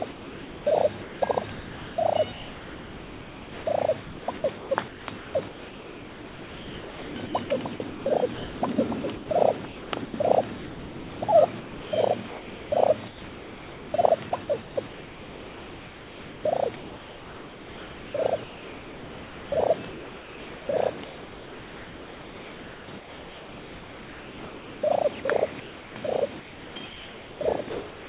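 From 0.12 s to the end, the sound is chopped by the voice detector, likely a sender-side detector repeatedly toggling transmission. About 18.8 s is replaced with comfort noise, so the audio cuts in and out. All of this sits in a band that stops at 4 kHz, which fits G.711 mu-law coding.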